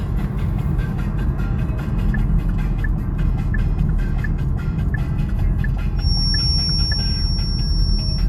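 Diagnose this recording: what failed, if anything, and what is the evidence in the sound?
The acoustic path between loudspeaker and microphone has likely closed into a loop sitting just at the edge of instability, a fault in the analogue playback-to-capture chain rather than in any digital stage. From 5.94 s to the end at 8.28 s, a feedback whistle near 5.5 kHz rides a little below the level of the sound, thin and steady, swelling and fading slowly in strength. The loop gain hovers near unity at that frequency, so the tone sustains without building into a howl.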